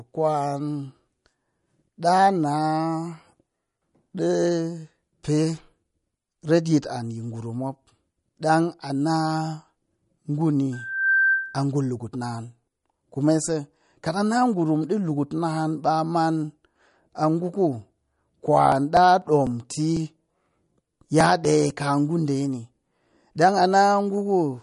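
Throughout, the speech has a watery, swirling quality, and nothing is heard above 11.2 kHz. This is likely MP3 compression, which fits a low bitrate near 46 kbps. Short of bits, the encoder cuts the treble and drops weak frequency detail.

From 10.72 to 11.65 s, a loudspeaker feedback squeal appears just before "ngu lukut naan". The microphone picks up its own loudspeaker, and the loop gain passes one at 1.6 kHz. A pure tone swells over about 0.4 seconds to roughly 5 dB above the speech.

From 17.98 to 21.70 s, between "a ngu" and "kaa ngu ɗe ni", there are periodic USB or driver dropouts. A stall every 0.248 s skips about 2 ms of audio. Around fifteen evenly spaced ticks sound against the speech.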